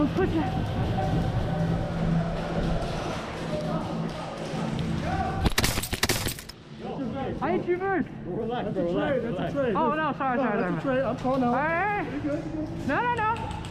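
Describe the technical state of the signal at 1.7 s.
At 1.7 s a doubled audio track is present from the start to 3.12 s: a full-band copy of equal level trails about half a second behind, likely from an out-of-step edit or second capture. It ends abruptly. On a spectrogram every event appears twice, repeated at a fixed offset with no decaying smear.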